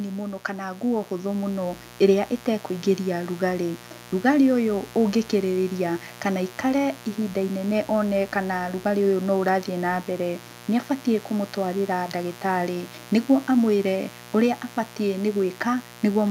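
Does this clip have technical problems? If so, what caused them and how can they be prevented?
Yes. A mains buzz runs through the whole speech clip. It is a steady, raspy tone built on 60 Hz. Something like a dimmer, a rectifier or an unshielded cable is letting sharp switching spikes into the signal, twice per mains cycle. Those spikes carry harmonics far above 60 Hz, which gives the buzz its rough edge. It sits roughly 20 dB below the speech. Keep audio cables away from dimmers and power supplies, and use shielded, properly grounded cabling.

The second problem is automatic gain rising, from 0.45 s to 2.97 s. Over those two and a half seconds, the level climbs by about 8 dB. The voice and the background swell together. The automatic gain control judged the input too quiet and slowly raised its gain. It is a gradual swell, not a jump. Turn off automatic gain control and set a fixed input level before recording.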